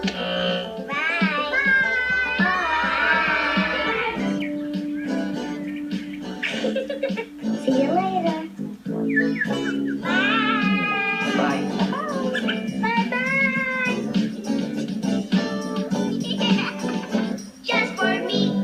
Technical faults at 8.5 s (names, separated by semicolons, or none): none